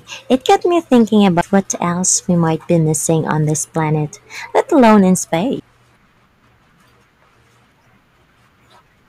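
Harsh crackle and fuzz break up the loud syllables from 0.32 to 0.55 s and again from 0.93 to 1.59 s. This is hard clipping. The speech was driven about 6 dB past what a stage in the chain could pass, so the peaks were sliced flat, and the squared-off tops spray harmonics high into the spectrum.

Inside that second stretch, at 1.41 s, a tiny tick marks a CD skip. The player muted for a couple of milliseconds when the laser jumped to another turn of the disc's spiral, and playback resumed from a different point.

The clipping returns briefly from 2.08 to 2.15 s, just before "we might", with a milder overload of about 3 dB that gives a lighter crackle. It comes back from 2.71 to 3.31 s, between "we might" and "this planet", at about 5 dB. The harshest fuzz is from 4.56 to 5.34 s, right after "this planet", where the overdrive reaches about 9 dB.

A second CD skip at 5.60 s brings another tick. 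There the mute lasts roughly 5 ms before the sound carries on from a displaced position on the disc.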